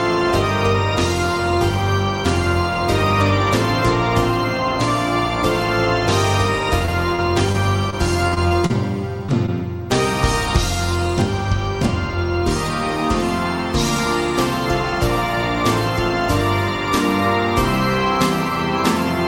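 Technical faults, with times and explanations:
6.85 to 8.76 s, repeated packet loss (robotic sound): Over this stretch of nearly two seconds, packets kept going missing. Nine separate holes add up to about 200 ms of lost audio, and the longest is 40 ms. Each hole gets patched by stretching the last bit of sound forward. Then the next hole arrives before things settle, so about 11% of the span is made-up fill. That produces the choppy, robotic texture with bits chewed out.
9.26 to 9.30 s and 9.46 to 9.50 s, short concealed packet loss: Right after the rough patch, two more isolated drops of about 20 ms each slip through. The receiver covers each one by carrying the previous sound forward, continuing its pitch or using shaped noise, and then crossfades back into the real signal. You hear each one as a quick smear or tiny wobble, and any very brief transient inside the gap can simply disappear.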